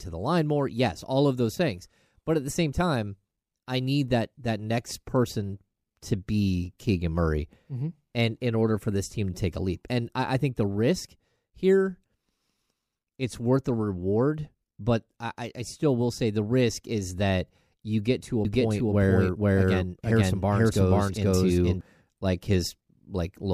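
A doubled audio track runs from 18.45 to 21.81 s in this speech clip, just after "you get to a": a second full-band copy trails about half a second behind at roughly equal level, dry and abruptly switched, likely from the signal being captured again through a slower path.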